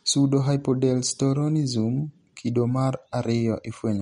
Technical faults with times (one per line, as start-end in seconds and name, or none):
0.00-4.01 MP3 compression